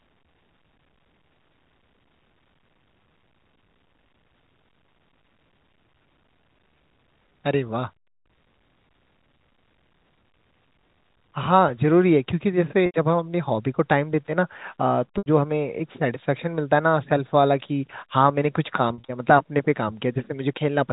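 At 12.86 s and again at 15.18 s, packet loss with pitch repetition leaves an 80 ms gap, likely four 20 ms packets, bridged by repeating the last pitch period, so the sound briefly holds on a buzzy, static tone. On a spectrogram these show as flat harmonic stripes, and the waveform as identical repeating cycles. From 18.88 to 19.08 s, 120 ms goes missing in scattered runs no longer than 40 ms, causing several brief, slightly held buzzy notes across the narrowband G.711 telephone signal.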